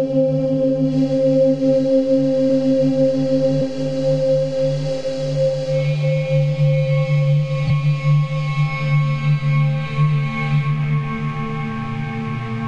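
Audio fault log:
7.66–7.71 s, compressed frames skipped: the sound jumps forward, losing roughly 50 ms. Whole compressed frames were never played, either missing or rejected as damaged.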